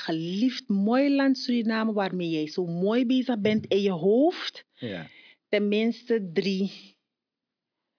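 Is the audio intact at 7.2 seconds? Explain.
Yes, at 7.2 seconds the speech plays through intact, with no audible fault at that moment.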